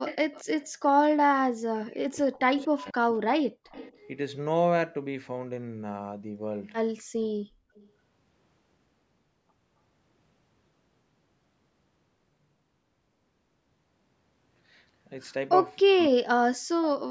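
From 0.05 to 0.69 s, a faint delayed copy of the talker returns, about 231 ms late and about 15 dB down. This is echo leak. The likely cause is a loudspeaker echo canceller failing to remove everything. At 0.18 s the talker dips by about 15 dB for a moment. At 0.85 s a smaller dip of about 5 dB follows. This is speech suppressed in double talk. Both sides were likely talking at once. From 1.45 to 3.57 s the same suppression goes much deeper, about 40 dB. Short echo scraps return at 2.6 s and from 3.72 to 3.98 s. These sit about 20 dB down, with delays near 240 ms. At 7.75 s a very faint echo, about 35 dB down, arrives about 260 ms late. From 15.82 to 16.37 s the talker is cut by about 40 dB again.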